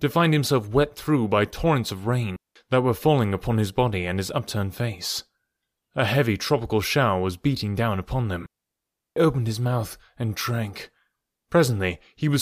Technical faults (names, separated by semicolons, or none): digital wireless dropout